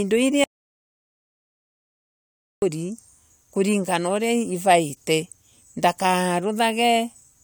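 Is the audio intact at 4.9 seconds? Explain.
Yes, the speech at 4.9 s runs through cleanly, with no dropout, click, distortion or other fault at that moment.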